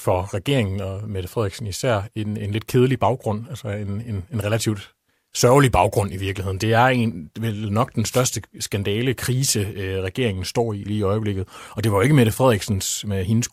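Speech clip with one wireless microphone noise hit, from 8.07 to 8.27 s, right after "en vel nok den" and before "skandale krise øh regeringen". It's a quick swish of static over the voice: the FM radio link faded as reflections cancelled, so receiver noise rose up for about 0.2 s.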